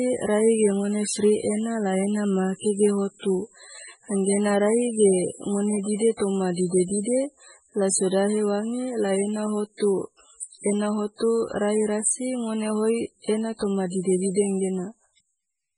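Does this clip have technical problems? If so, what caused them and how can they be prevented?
Yes. Heavy MP3 compression runs through the whole speech clip, likely from encoding at a very low bitrate, around 16 kbps. Starved of bits, the encoder drops weak frequency lines, giving a watery, swirly sound. A spectrogram shows a hard ceiling with nothing above 10.5 kHz and flickering holes below it. Prevent it by encoding at a much higher bitrate or keeping a lossless copy.

Clock slip clicks run from 0.13 s to 15.75 s, roughly every 0.05 s, about 300 in all, and the rate is fast enough to form a soft rattle. The likely cause is two unsynchronised device clocks differing by around 500 ppm, so one sample is dropped or repeated at each slip. The waveform shows tiny, evenly spaced discontinuities. Prevent this by locking both devices to one word clock or using proper sample-rate conversion between them.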